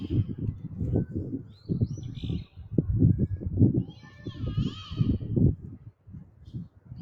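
A clip of sounds passed through a speech-tuned noise suppressor applied to music or sounds: it mistakes steady tones and tails for noise, so level swings by roughly 15 dB, seen as a pumping, uneven waveform envelope. Sound cut by the noise suppressor occurs at 0.54–0.69, 1.39–1.69, 2.47–2.66, 3.9–4.3, 5.57–6.49 and 6.66–6.86 s, dropping about 5 to 6 dB, visible on a spectrogram as dimmed, prematurely truncated decays.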